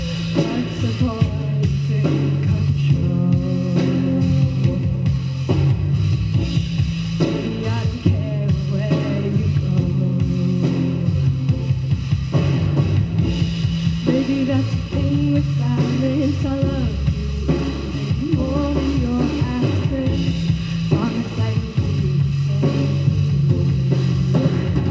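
No technical faults occur at any point, and the audio carries the band limit of its call codec path, with nothing above 8 kHz.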